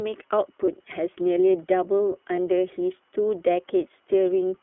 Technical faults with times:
0.00-4.62 iLBC codec
0.66-0.69 lost iLBC frames
2.35-2.40 lost iLBC frames

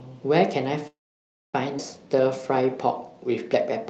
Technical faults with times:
0.87-1.55 call audio freeze
1.77-1.80 skip ahead
2.07-3.71 jitter buffer slow-down

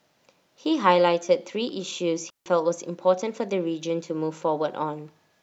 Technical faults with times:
2.30-2.46 digital wireless dropout

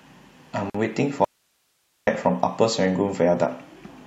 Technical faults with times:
0.70-0.74 gap at a join of encoded pieces
1.24-2.07 audio dropout to a faint residue

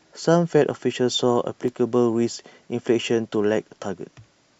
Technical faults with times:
0.68-3.69 periodic USB or driver dropouts

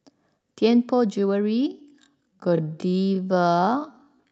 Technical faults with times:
0.39-0.44 short stall from a late packet
1.67-4.31 time-stretched section

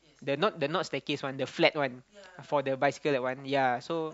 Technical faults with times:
none

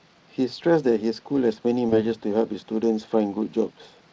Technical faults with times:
1.89-1.93 VoIP packet loss concealed by the speech codec

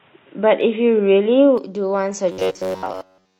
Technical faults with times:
0.00-1.58 input switched to a poorer device
2.32-3.39 robotic sound from repeated short buffers
2.45-2.52 damaged data in a compressed stream

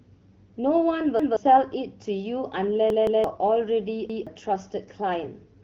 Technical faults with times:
1.19-1.37 repeated buffer
2.90-3.24 repeated buffer
4.10-4.27 repeated buffer

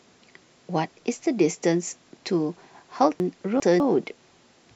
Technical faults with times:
3.20-3.80 chunks out of order

